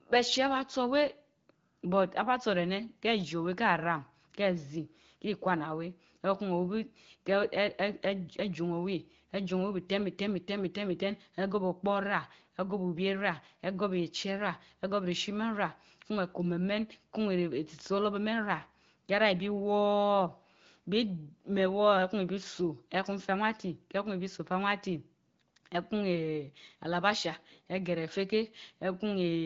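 No technical faults can be heard in this speech, which comes through an AMR wideband (HD Voice) link at 15.85 kbit/s with nothing above about 7.6 kHz.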